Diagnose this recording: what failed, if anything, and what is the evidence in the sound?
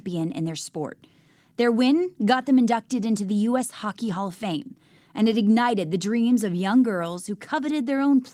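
Nothing in the chain from capture to playback shows a failure: the speech signal holds steady and continuous throughout, with no audible disturbance pointing to any stage.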